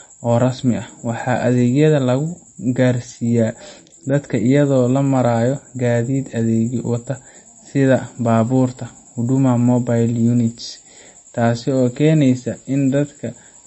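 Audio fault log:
Throughout, MP3 compression: the speech has no content above 8 kHz, and the remaining treble sounds plainly watery and swirly, with metallic chirps on s sounds and smeared consonant attacks. The likely cause is an encoder starved of bits, which fits a 32 kbps stream. It cut the top of the band at a fixed point and zeroed weak frequency lines, which then flicker on and off from frame to frame and create the swirl.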